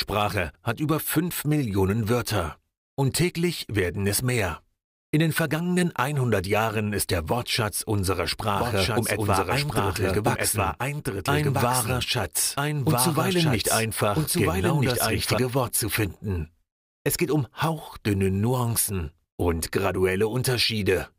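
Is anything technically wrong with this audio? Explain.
Yes. From 8.56 s to 15.38 s the audio carries a doubled audio track: a second, full-band copy trails about one and a half seconds behind, at roughly the same loudness, with no decay or room colour, and it cuts in and out abruptly. The likely cause is a slower second capture path or an edit holding two misaligned copies. On a spectrogram every feature repeats as a shifted twin; the waveform shows denser, summed energy with sharp edges at both ends.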